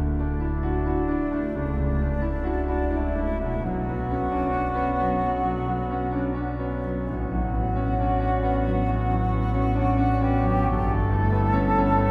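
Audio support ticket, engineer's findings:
Doubled audio track throughout. Second full-band copy trails the original by roughly 300 ms, at about the same level. Dry, no decay or room colour. Likely a second capture path with extra latency, or an edit holding two out-of-step copies.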